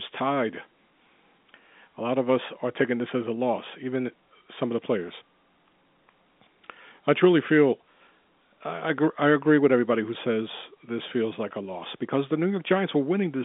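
No technical faults are present.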